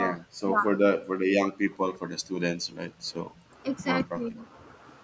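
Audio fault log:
0.08–1.28 s, 1.68–1.99 s, 4.07–4.47 s: speech suppressed in double talk. The talker's own speech sinks in pieces. The first stretch is hit hardest, with dips of around 40 dB over roughly half a second in total. The second dips only about 10 dB for a tenth of a second, and the third about 15 dB over roughly 0.3 s. This likely comes from the echo canceller turning everything down while both sides spoke at once. What sets it apart from gating is that the speech itself is chopped, not just the quiet room sound between phrases.
2.21–3.45 s: background gated by the echo canceller. Within this span the room tone falls away, by about 25 dB at its deepest, for roughly half a second altogether, then swells back. The canceller is clamping the microphone while the far side plays through the loudspeaker, and it lets go afterwards. Unlike double-talk suppression, the losses sit in the ambience, so the hiss and air of the room switch off and on rather than syllables vanishing.
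3.00 s and 3.36 s: echo leak. Two brief, faint scraps of a delayed copy of the voice slip through, each about 50 ms long. They sit around 35 dB under the main speech, and each trails its source by 163 ms. The likely cause is a loudspeaker-side echo canceller failing to remove everything its microphone picked up. The fixed, distinct delay separates these from room reverberation, which would smear continuously instead of arriving as a discrete late copy.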